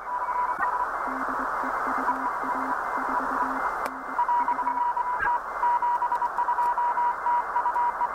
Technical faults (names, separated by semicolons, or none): damaged data in a compressed stream